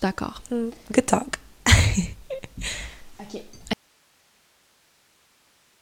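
At 3.73 s the speech cuts out abruptly and never comes back, so it's an audio dropout to a faint residue running right to the end. What's left in the gap is just hiss, roughly 45 dB below the speech level. There's no fade or natural pause, just a hard switch. The likely cause is the feed being lost upstream while the path after the break stayed live and kept passing its own noise floor.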